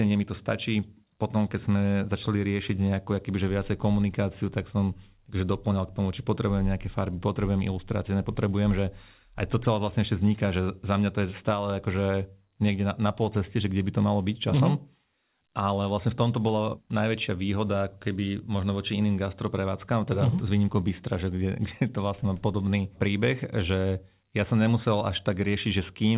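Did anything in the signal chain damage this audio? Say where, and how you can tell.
No, nothing in the signal chain damaged this audio; it went through a G.711 A-law call path, which leaves nothing above 4 kHz.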